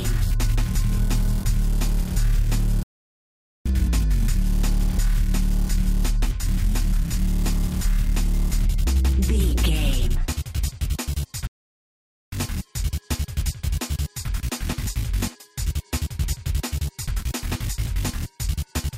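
At 2.83 s the sound cuts out abruptly and the output stays silent until 3.66 s, a gap of about 0.82 s; a second dropout runs from 11.47 s to 12.32 s, about 0.85 s. Both are playback stalls. The player most likely ran short of data, or its audio thread was blocked, so nothing reached the output until it recovered. Each is heard as a sudden, clean hole in the middle of the audio, followed by a hard restart.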